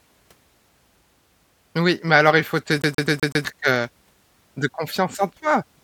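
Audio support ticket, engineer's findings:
Stutter 2.82–3.45 s, just after "alors il faut te": CD stuck on one turn. A 126 ms segment loops five times, muted briefly at each jump. Laser kicked back one track per revolution by a scratch. Waveform: identical repeating blocks separated by tiny silent gaps; spectrogram shows evenly spaced vertical seams.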